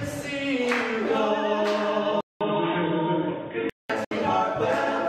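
An input switched to a poorer device, likely, from 2.21 to 3.90 s. After a 0.2 s silence, the audio loses everything above 3.8 kHz and turns dull, with a faint new background noise far beneath it and little change in level, before the fuller sound returns. A digital broadcast dropout from 4.04 to 4.12 s mutes about 64 ms behind a 3 ms fade, which fits two lost frames of 32 ms each, as the receiver silenced the output until valid data resumed.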